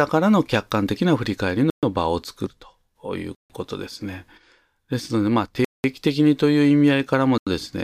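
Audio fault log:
1.70–1.83 s, 3.35–3.50 s, 5.65–5.84 s, 7.38–7.47 s: Bluetooth stall. The speech drops to dead silence four times, for 127, 149, 195 and 88 ms, then resumes. This is likely a wireless buffer running dry while delayed packets were resent.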